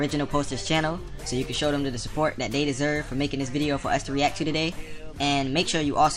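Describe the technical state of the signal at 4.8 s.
At 4.8 s the signal is intact, with no audible fault at that point.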